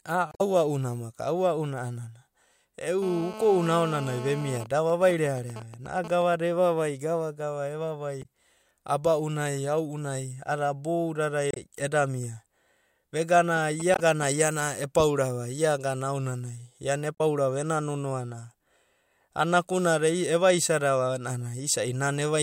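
A short glitch breaks into the speech at 0.30 to 0.41 s. This is damaged data in a compressed stream: some bytes in the encoded file are wrong, so the decoder misreads those frames, loses its place, and has to hunt for the next valid frame header before it can play cleanly again.

From 3.02 to 4.58 s a hard, raspy buzz sits under the speech at about 13 dB below it. The tone is rich in harmonics and has nothing to do with what is being said. This is GSM phone buzz. A 2G handset nearby is in a call and transmitting radio bursts 217 times a second. The audio circuitry rectifies those pulses, which puts a steady 217 Hz rasp into the signal.

The buzz then breaks into even ticks with a longer 217 Hz buzz twice a second from 4.60 to 6.34 s, ending just before "evavai gava gava". This is GSM signalling bursts. The phone is still in the call, but its user has gone quiet, so it sends only sparse groups of bursts, well below the speech level.

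Right after "evavai gava gava", a second glitch from damaged data appears at 8.19 to 8.26 s. Another follows at 11.51 to 11.57 s. Each is a quick break where the decoder trips over corrupt frames and resynchronises.

A second stretch of signalling bursts runs from 13.56 to 14.24 s, just before "iana epaurava iagana". This time the phone is signalling on its own, as when a call or text is about to arrive, and it produces a galloping dit-dit-dit of short 217 Hz buzzes well under the speech. A compressed-stream glitch lands in the middle of it, at 13.93 to 13.99 s.

The last glitch from damaged data comes at 17.15 to 17.21 s.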